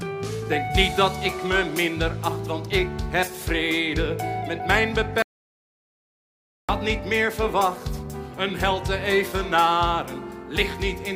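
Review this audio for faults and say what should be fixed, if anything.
There's one thing to fix: an audio dropout to silence from 5.22 s to 6.69 s. The sound stops abruptly and the gap is silent, with no room tone at all, so nearly 1.5 s of material is simply missing before it picks up again mid-flow. That points to the input itself going away rather than anything in the processing, most likely a connection that briefly dropped or a mute that got hit while the recorder kept writing. Check cables, wireless links and mute controls, and keep an eye on input meters while recording so a dead signal gets caught straight away.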